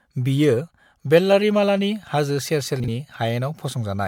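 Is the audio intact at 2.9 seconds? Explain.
No. Just after "बियो वेल्लारीमालानि हाजो", from 2.8 to 2.88 s, chunks play out of order: a 40 ms chunk arrives one chunk late, so the sound jumbles at three hard joins. On a waveform these show as abrupt discontinuities, and on a spectrogram as thin vertical broadband lines.

The sound there is also swirly, smeared and hollow, with blurred attacks. This is likely generation loss from about four successive MP3 encodes near 100 kbit/s, each quantising on a shifted frame grid. A spectrogram shows patchy holes and smeared onsets.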